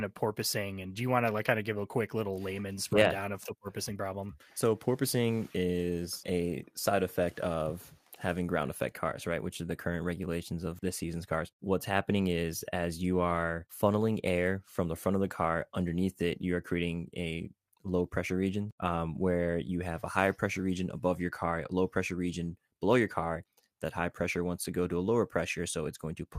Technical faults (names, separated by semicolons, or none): none